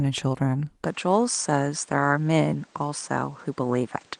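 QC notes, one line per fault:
0.84 s to the end, input switched to a poorer device: right at 0.84 s the speech goes duller and a bit boxy, with nothing above 9.4 kHz, drops about 5 dB in level, and picks up a new noise floor sitting well below the speech. No gap at the changeover. It sounds like the recording likely jumped to a different mic or a headset's call profile, with that device's narrower band, its own colour and its own hiss. The light Opus coding is still there underneath.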